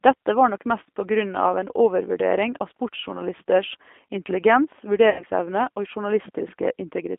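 G.729 codec damage runs throughout. The sound is rebuilt from a filter, pitch predictor and sparse pulses at a rate that fits 8 kbit/s, limited to about 250 Hz to 3.5 kHz, and it comes out plainly rough and synthetic. VoIP packet loss concealed by the speech codec occurs from 5.10 to 5.25 s. About 90 ms of audio, which fits three lost packets, is replaced by a decaying extrapolation of the last pitch and filter, and the sound stays weakened briefly after it resumes.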